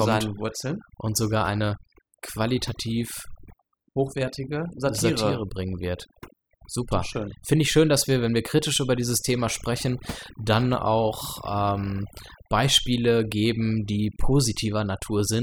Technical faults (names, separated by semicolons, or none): overdone noise removal